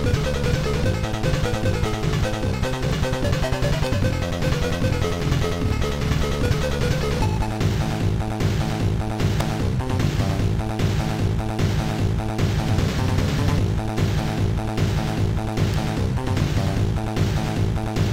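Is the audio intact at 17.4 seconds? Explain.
Yes, the audio is intact at 17.4 seconds, with no fault present at that moment.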